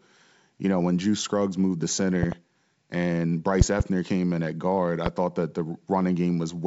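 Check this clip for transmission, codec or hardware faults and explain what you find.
Three loud pops break into the speech; the G.722 wideband coding underneath sounds clean. The first, a double pop at 2.23 to 2.35 s just after "moved the", peaks about 15 dB above the speech. A second double pop follows at 3.61 to 3.83 s, right before "came in at guard", and a single pop at 5.06 to 5.09 s falls between "in at guard I" and "thought that the". Both later pops peak about 20 dB above the speech. Each is a sharp transient laid over speech that continues beneath it, likely from a voltage pulse such as a connector, switch or static discharge, shaped by the following circuitry.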